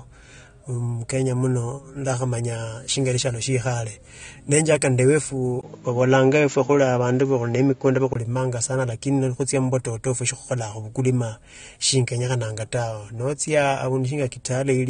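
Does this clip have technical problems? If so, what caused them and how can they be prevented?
Yes. Throughout the speech, the top end stops near 9.7 kHz and sibilants take on a fizzy, warbling smear, most likely AAC compression at a low rate, which fits AAC-LC at about 32 kbps. Unlike a device change, it stays constant for the whole clip. Encoding at 96 kbps or more prevents it.

From 5.61 to 8.15 s the input switched to a poorer device, likely a fallback microphone or headset call profile. The band narrows to 7.3 kHz, the level shifts by about 5 dB, and a new noise floor appears roughly 40 dB down. A 20 ms gap marks the switch, and the sound clears again afterwards, which separates it from steady codec damage. Locking the input device and disabling automatic switching prevents it.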